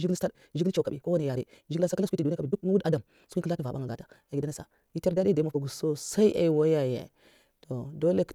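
From 0.0 to 5.6 s the speech runs at roughly double pace, about 1.95 times normal, then drops abruptly back to natural timing. It sounds rushed, yet the pitch stays where it should. That points to a time-stretched section, likely squeezed by software that kept pitch by discarding short slices. Simply playing the audio faster would also raise the pitch, which does not happen here.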